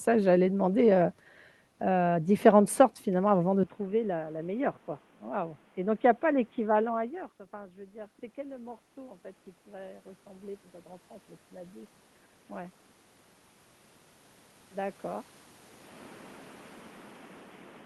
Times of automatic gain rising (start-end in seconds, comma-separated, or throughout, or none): 6.92-12.00